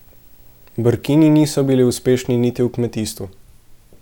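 From the start to 2.56 s, video or display buzz sits under the speech: a buzz at the 59.94 Hz field rate with hash above it, plus a thin high tone near 15.7 kHz from the line rate. It is a screen or video cable coupling into the audio path, sitting well below the speech.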